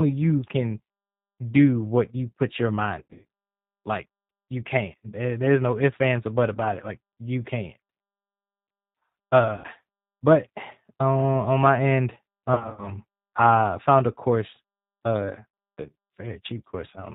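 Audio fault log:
throughout, G.729 codec: The speech is band-limited with nothing above 4 kHz, and has a slightly rough, synthetic edge. The codec rebuilds each 10 ms frame from a vocal tract filter, a pitch predictor and a few pulses, which fits an 8 kbit/s G.729A coder. Unlike a plain low-pass filter or a low-bitrate MP3, the damage is a buzzy, model-based texture rather than dullness or swirling artefacts.
3.00–3.25 s, 5.04 s, 9.56–9.67 s, 12.54–12.92 s and 15.49–15.59 s, VoIP packet loss concealed by the speech codec: Audio goes missing in short runs, and the decoder fills each gap by extending the last pitch and filter while fading the gain. The longest runs are about 80 ms near 9.6 s, 70 ms near 3.0 s and 40 ms near 12.5 s, and the others are brief. The gaps become buzzy, stretched tones or fading coloured noise, and the voice stays weak briefly after each gap. Unlike dropouts or glitches, there is no silence or click.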